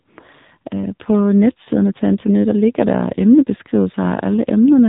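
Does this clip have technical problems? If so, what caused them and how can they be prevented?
Yes. Throughout, the speech sounds thin, buzzy and synthetic, with nothing above 3.8 kHz. This is the AMR narrowband mobile codec, which rebuilds speech from a vocal-tract model driven by sparse pulses. The plainly audible damage points to a low bitrate, around 7.4 kbps. To prevent it, capture or transmit the audio over a wideband or uncompressed path rather than a narrowband mobile call.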